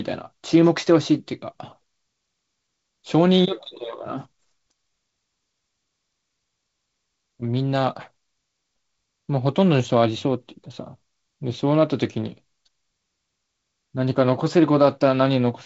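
No technical faults occur anywhere in this speech clip, which comes through G.722 wideband telephone coding with its sound reaching up to about 7.7 kHz.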